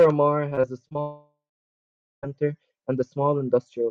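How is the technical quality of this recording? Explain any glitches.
The recording has two connection faults.

From 0.49 to 0.97 s the speech turns choppy. This is repeated packet loss (robotic sound): six short holes, the longest about 23 ms, were each patched by stretching the preceding sound. About a quarter of that half-second is filler rather than real audio, roughly 120 ms in total, so small pieces of the speech are missing.

From 1.01 to 2.25 s the speech breaks off. A brief fading continuation of the last sound gives way to silence lasting about 0.84 s, and then the speech resumes further along. This is most likely a long network dropout. The receiver had nothing to play for about 1.2 s, padded the start of the gap, then went quiet, and that stretch of speech is lost.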